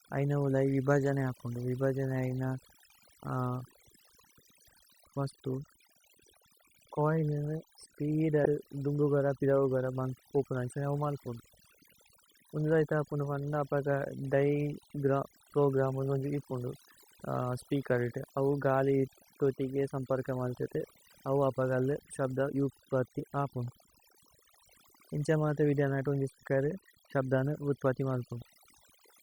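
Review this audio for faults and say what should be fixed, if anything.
Overdone noise removal affects the entire speech clip. The noise reduction was set too aggressively: individual frequency bands that sit close to the estimated noise floor are pulled down or cut out completely, and the quieter components of the voice are removed along with the noise. The background drops and breaks up into twinkling, sparkly specks. To prevent this, apply less reduction depth and a gentler threshold, and check the result against the unprocessed recording.

Compressed frames skipped occurs at three points. At 8.44 s, between "ഛോഇലിനേ സ്പീദേ" and "ദുമ്ബു ഗര", about 70 ms of audio is missing. At 23.19 s about 40 ms is missing, and from 26.40 to 26.43 s about 100 ms. Each jump matches a whole number of 10 ms frames, roughly seven, four and ten respectively, dropped during decoding. To prevent this, verify the integrity of the file and the transmission path so that no frames are lost or rejected as corrupt.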